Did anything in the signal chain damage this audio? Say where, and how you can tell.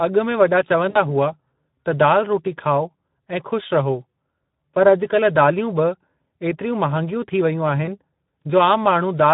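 Yes. The codec stage is at fault for the whole clip: this speech has gone through the Speex codec, and the damage is plainly audible. The voice sounds hoarse and grainy, with the fine harmonic detail replaced by a noisy, buzzy texture. That points to a CELP coder running at a modest rate, which fits a Speex mode around 11 kbps. At that rate there are too few bits to model the excitation accurately, so the voicing comes out rough.

The network stage shows VoIP packet loss concealed by the speech codec in two places. The first runs from 0.89 to 0.98 s, right after "में वॾा". Its length fits about 60 ms of missing audio. The second runs from 7.85 to 7.89 s, after "थी वेयूं", and fits a single 20 ms loss. In both places the sound is stretched out and fades rather than simply stopping. The decoder was repeating its last pitch and filter state while lowering the gain. The voice stays weak for a moment before recovering.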